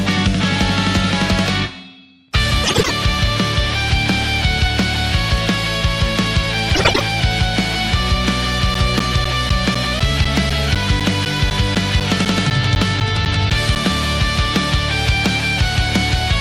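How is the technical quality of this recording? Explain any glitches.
There are two kinds of glitch here: a couple of scrambled stretches early on, then a run of regular ticks in the back half.

The frames out of order happen at 2.64–2.91 s and again at 6.74–7.01 s. In each, two neighbouring blocks of roughly 96 ms, which fits runs of four frames, got decoded in swapped order. The sound briefly jumbles into a garbled flutter, but no time goes missing.

From 8.74 s to 13.76 s there are periodic USB or driver dropouts, one every 0.25 s, around twenty in all. Something keeps blocking the audio path on a fixed schedule, and each time roughly 10 ms of signal is lost and replaced with silence. You hear it as a steady ticking that rides along with the sound.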